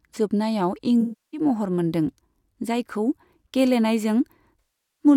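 From 1.01 to 1.40 s and again from 4.59 to 5.05 s, there is AAC frame loss with concealment. About 320 ms and 405 ms of coded audio go missing. The decoder rebuilds each gap from the last good spectrum, so the speech smears into a noisy, phasey wash.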